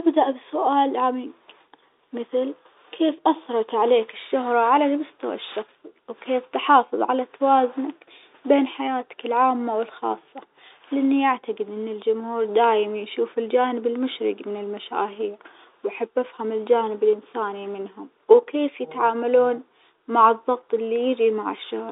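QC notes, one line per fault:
The speech sits within a telephone band of roughly 300 Hz to 3.7 kHz with faint level-following grain, consistent with standard G.711 telephone coding at 64 kbps, and no faults are present.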